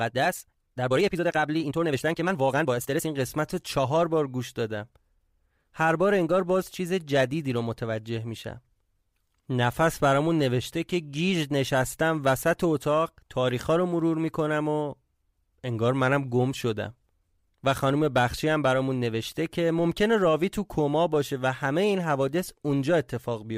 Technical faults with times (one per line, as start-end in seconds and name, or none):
0.00-3.08 time-stretched section